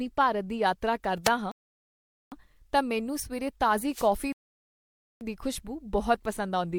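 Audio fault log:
1.24 to 1.30 s and 3.90 to 4.09 s: wireless microphone noise hit. A brief swish of static rises over the speech, the first right after "ਭਾਰਤ ਦੀ ਯਾਤਰਾ", the second after "ਤਾਂ ਮੈਨੂੰ ਸਵੇਰੇ". The FM radio link faded as reflected signals cancelled, letting receiver noise surge through.
1.52 to 2.32 s and 4.32 to 5.21 s: rebuffering stall. The audio drops to dead silence, then picks up exactly where it stopped, the first time resuming with "ਤਾਂ ਮੈਨੂੰ ਸਵੇਰੇ". The player ran out of downloaded data and waited, adding about 0.80 s and 0.89 s without losing anything.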